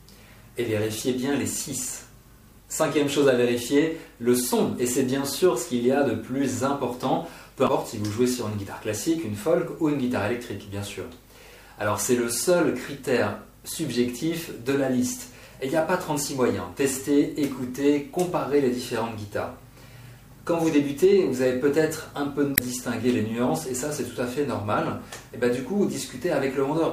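Damaged data in a compressed stream occurs twice, from 7.64 to 7.69 s and from 22.53 to 22.60 s, each lasting well under a tenth of a second. At both points some of the encoded bytes were wrong, so the decoder misread or discarded the affected frames, lost its place in the stream and had to hunt for the next valid frame header before normal playback resumed. The result is a brief disruption that breaks the continuity of the sound.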